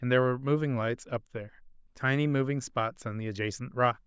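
No technical faults can be heard anywhere in this speech recording. There is nothing to place in time, as no moment of the audio stands out as going wrong.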